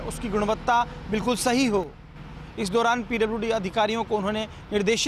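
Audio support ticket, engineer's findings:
One channel drops out, 1.84 to 2.16 s (about 0.32 s). Abrupt level drop of about 6 dB, then abrupt recovery. Likely a lost left or right feed upstream of the mono sum. Shared content halves, and material unique to that channel vanishes.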